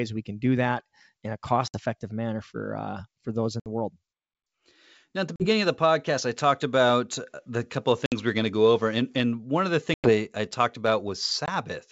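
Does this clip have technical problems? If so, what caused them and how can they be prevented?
Yes. Packet loss on an ADPCM call cuts hard-edged silent holes into the speech at 1.68, 3.60, 5.36, 8.06, 9.94 and 11.46 s, each between 20 and 100 ms long, which fits one to five lost packets each time. Unlike a simple dropout, the speech does not resume cleanly. The decoder's predictor and step size no longer match the sender's, so a click, a wrong level or brief distortion follows each gap and settles within some tens of milliseconds. The G.722 wideband coding stays clear up to 7 kHz. Prevention: add a jitter buffer with packet-loss concealment and decoder state resets, and carry the call over a network path with less loss.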